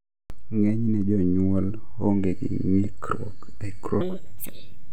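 From 4.01 s to the end, a section at the wrong speed, likely from a clock mismatch, plays 1.71 times fast, so the speech rushes and jumps roughly ten semitones higher.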